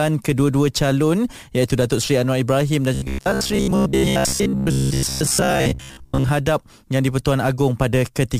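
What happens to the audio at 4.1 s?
At 4.1 s the speech sits inside robotic sound from repeated short buffers, spanning 2.94 to 6.29 s. New audio likely arrives too seldom, so most of the signal is a short slice replayed every 15 ms. This forces a rigid, metallic 66.7 Hz buzz that only loosely follows the speech.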